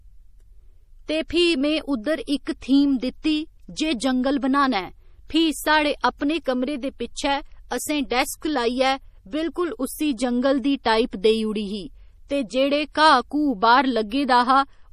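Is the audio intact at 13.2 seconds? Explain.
No. At 13.2 seconds the speech carries the same damage heard across the whole clip, most likely from MP3 compression at a bitrate low enough to fit about 40 kbps. Short of bits, the encoder cut the treble so nothing remains above 15 kHz and dropped weaker frequency lines, which drop in and out between frames. The result is a plainly audible watery, swirling texture, with metallic chirps on s sounds and smeared consonant onsets.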